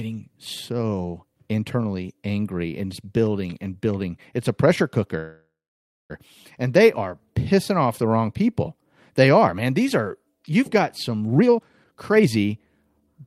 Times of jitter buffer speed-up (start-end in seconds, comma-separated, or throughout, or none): 11.27-13.22